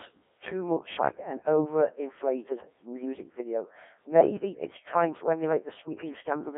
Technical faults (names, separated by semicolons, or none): Codec 2 vocoder